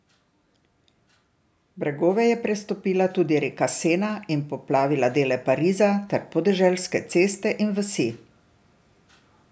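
From 1.75 s to 4.58 s, automatic gain rising lifts the level by about 6 dB as the control judges the input too quiet. Voice and background noise swell together, which separates it from a talker moving closer to the microphone.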